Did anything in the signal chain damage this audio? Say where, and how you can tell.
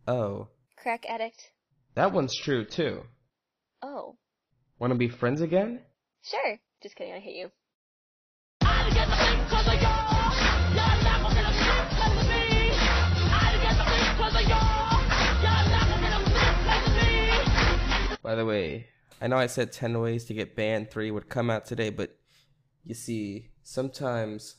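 Yes. At the network and codec stage, the audio shows an adaptive stream at a lower bitrate from 1.07 s to 19.07 s. Quality drops suddenly with no gap, everything above 6.5 kHz vanishes, and the sound turns dull and swirly. This fits a switch from an AAC stream of about 96 kbit/s to one near 24 kbit/s as bandwidth fell. A spectrogram shows a flat ceiling at 6.5 kHz over those 18 seconds, while the waveform runs on unbroken.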